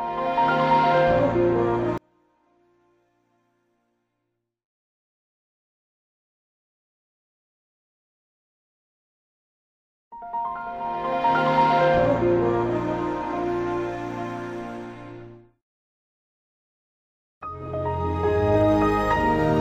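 From 1.98 s to 7.98 s, the likely cause is one channel inverted: one side of a stereo pair arrived with its polarity reversed, so when the two were folded down to mono, everything they shared cancelled. The sound drops by about 38 dB for those six seconds, background included, leaving only the small difference between the channels audible before the level returns at 7.98 s.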